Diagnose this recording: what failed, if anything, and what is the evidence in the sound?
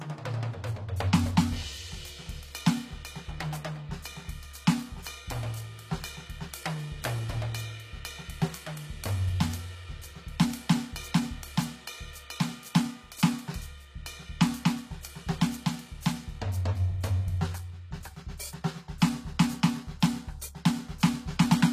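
The codec stage likely failed: HE-AAC compression at a low bitrate, near 24 kbps, rebuilds the treble by copying lower bands upward. Throughout the music, codec damage is plainly audible, with synthetic, misaligned upper harmonics, and nothing remains above 14.9 kHz.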